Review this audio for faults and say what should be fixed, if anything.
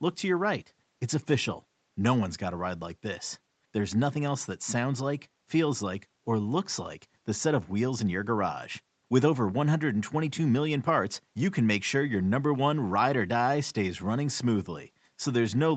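Nothing here needs fixing. The speech carries nothing above 8 kHz, which fits its passage through a call microphone chain and an Opus call codec working as intended.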